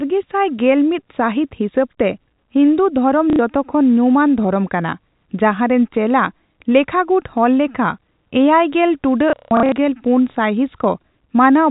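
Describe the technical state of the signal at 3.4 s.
Just before 3.4 s, from 3.30 to 3.39 s, packet loss with last packet repeated fills a 90 ms gap, consistent with three 30 ms packets. A stuttering buzz sounds across the run, seen as repeated waveform blocks and vertical spectrogram lines.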